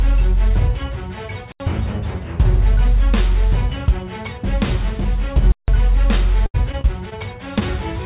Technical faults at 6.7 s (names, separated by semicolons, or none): repeated packet loss (robotic sound)